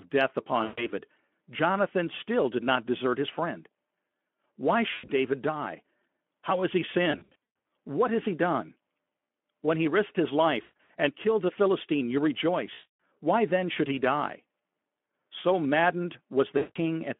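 VoIP packet loss concealed by the speech codec strikes at 0.64, 4.93, 7.11, 10.61, 12.73 and 16.57 s. Packets are lost, so the decoder stretches its last pitch and filter with falling gain. The speech, carried by light narrowband Speex, turns into a buzzy tone or coloured noise that fades, and stays weak just afterwards.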